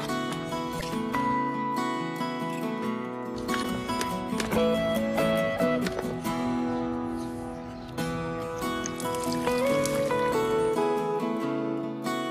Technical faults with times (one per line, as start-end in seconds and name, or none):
0.77-0.83 damaged data in a compressed stream
3.59-3.65 damaged data in a compressed stream